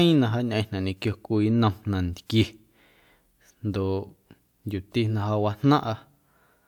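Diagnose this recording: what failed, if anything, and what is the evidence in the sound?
Nothing in the speech recording points to a failure at any stage: the signal stays continuous and intact throughout, with no audible disturbance from the chain that captured, processed or reproduced it.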